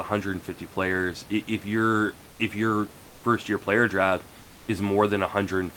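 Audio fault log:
2.31–2.39 s and 4.41–4.67 s, comfort noise in place of the background: Before "if your first year" and after "first year player draft", the room noise turns flat and featureless, about 2 dB quieter. Likely Opus discontinuous transmission, with synthetic noise filling the pauses.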